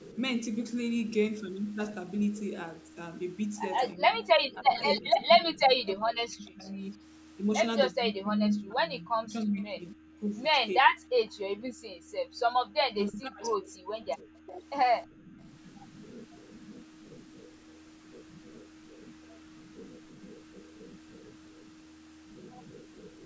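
Speech suppressed in double talk hits this speech recording four times: 3.94 to 6.84 s, 7.9 to 10.24 s, 10.78 to 11.05 s and 12.71 to 14.64 s. The talker's level sinks in broken stretches, by roughly 25 dB in the shallowest dip and as much as 40 dB in the deepest, for up to a couple of seconds at a time. The likely cause is an echo canceller facing both sides talking at once, failing to tell the near talker from the loudspeaker echo and turning everything down together. Background gated by the echo canceller also occurs at 11.56 to 12.38 s and again at 15.07 to 15.39 s. Here the room sound itself drops away by about 40 dB for well under a second, because the canceller clamped the microphone hard while the far end was playing, then comes back as soon as it releases. The call microphone processing that shapes the whole clip leaves nothing above 8 kHz.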